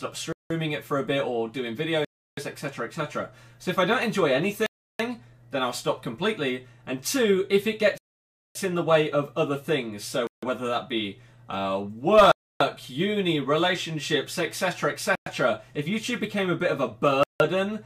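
Eight abrupt cuts to silence interrupt the sound at 0.33 s, 2.05 s, 4.66 s, 7.98 s, 10.27 s, 12.32 s, 15.15 s and 17.23 s, each lasting 0.11 to 0.57 s. These are likely Bluetooth stalls, where delayed packets empty the headphones' buffer and playback halts until retransmitted data arrives.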